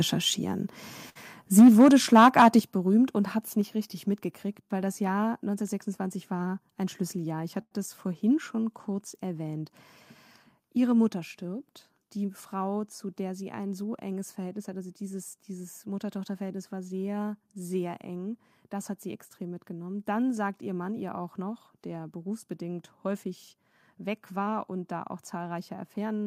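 At 1.09 s the speech hangs for a moment: a short stall from a late packet, where the receiver ran dry and stretched the last bit of sound for about 60 ms until the packet showed up, then carried on from the same spot. You hear a held sound with a slight buzz or dip rather than anything missing. The same thing happens again at 7.62 s, a longer stretch this time of about 95 ms, so the hold is more noticeable there.

From 1.58 to 1.88 s the loudest syllables turn harsh and crackly, which sounds like microphone overload. The peaks go about 4 dB past the converter's ceiling and their tops get sliced off, and a good chunk of the waveform is flattened in that stretch. It comes back from 2.15 to 2.48 s, running about 5 dB over, though fewer samples are actually clipped this time.

The level steps down suddenly at 1.60 s, by about 2 dB, again at 2.60 s by a bigger 7 dB, and once more at 11.09 s by about 3 dB. 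Each one is a microphone volume stepped down, with speech and background dropping together in a single jump. The first two land right on or just after the distorted peaks, so they're likely the call software's gain control reacting to the overload.

From 6.47 to 7.03 s the speech sounds rushed but keeps its pitch. That's a jitter buffer speed-up: the buffer had built up more audio than it wanted, so the receiver trimmed out tiny pitch-period slices, about 70 ms in total, running at roughly 111% speed. Later, from 23.06 to 24.79 s, it does the same more gently, at about 104% over a longer stretch, so it barely sounds hurried.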